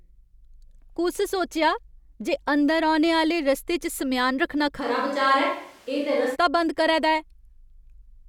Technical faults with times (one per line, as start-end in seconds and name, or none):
4.82-6.34 switch to a distant microphone